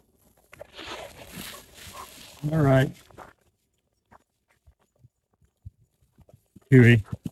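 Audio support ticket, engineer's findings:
No faults found in the audio for this ticket.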